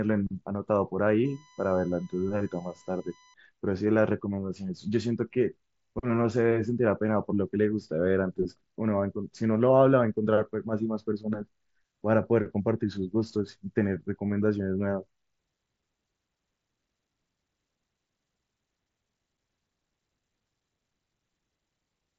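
From 1.25 to 3.34 s, USB whine: a steady 1 kHz tone, about 30 dB below the speech, leaking from the bus's 1 ms frames, drawn as a flat horizontal spectrogram line.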